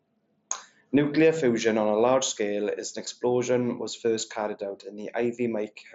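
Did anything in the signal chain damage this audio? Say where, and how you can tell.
No, nothing in the chain is damaging this speech, and the Bluetooth mSBC headset link it runs over sounds just as that wideband codec should, with the band topping out around 8 kHz and only the light coding texture you'd expect at about 61 kbps.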